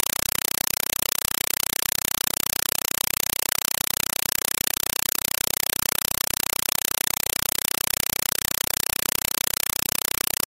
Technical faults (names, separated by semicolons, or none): compressed stream played as audio